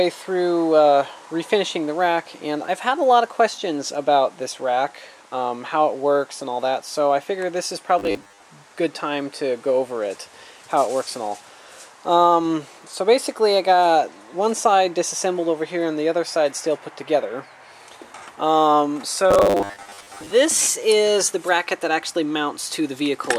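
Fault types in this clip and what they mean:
Robotic sound from repeated short buffers: from 7.99 to 8.44 s and again from 19.31 to 20.31 s, the sound turns into a rigid, metallic buzz at 100 Hz that still loosely tracks the underlying audio. The likely cause is new audio arriving too rarely, with playback filling the gaps by looping a 10 ms slice. About half the material is replaced by these repeats, and their fixed rate sets the buzz pitch.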